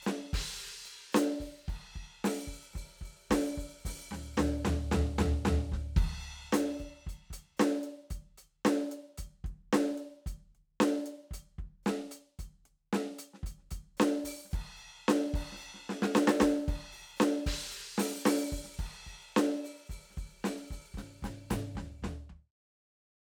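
There are no technical faults in this music; the only change is a gentle fade-out in the last second or so, ending at about 22.55 s.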